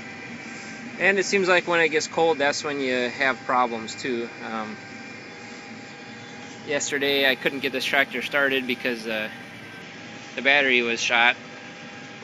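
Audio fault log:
6.89 to 9.82 s, imaging from linear upsampling: the top end turns dull while a faint metallic shimmer sits on bright sounds. Straight-line interpolation, which fits a 16 kHz source raised to 44.1 kHz, leaves mirrored spectrum copies at 8 to 16 kHz, roughly 30 dB down.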